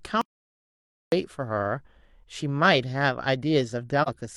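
At 0.21 s the speech cuts off abruptly. What follows is an audio dropout to silence lasting about 0.91 s, until 1.12 s. The gap is dead digital silence. No room tone or hiss remains underneath. The likely cause is a lost input, such as a disconnected device, a failed link or an accidental mute, while the recorder kept writing zeros. The speech resumes mid-flow at 1.12 s. Whatever was spoken in between is gone.

At 4.02 s a brief hole appears, ending at 4.09 s. It lasts about 43 ms. This is AAC frame loss with muting. Its length fits a single missing frame. The decoder zeroed that frame's spectrum. The overlapping windows then faded the sound out and back in. The edges are soft. It sounds like a brief dip in the speech rather than a hard cut.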